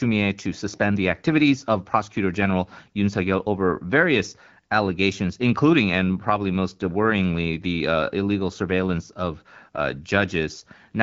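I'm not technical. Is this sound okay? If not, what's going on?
Yes, nothing here is wrong. The speech has passed through the AMR wideband (HD Voice) codec used for phone calls, and its compression does only light damage at this setting.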